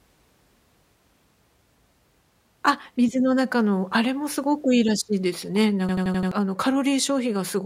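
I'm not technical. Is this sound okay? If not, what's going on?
No. Around 5.89 to 6.32 seconds there's a system hang loop: the computer briefly froze, but the sound hardware kept replaying the last small chunk of audio it had been handed. That chunk is about 85 milliseconds long, which fits a 4096-sample buffer, and it repeats five times in a row, about 12 times a second. You hear the speech stutter like a machine gun, and close to half a second of what should have come next is lost.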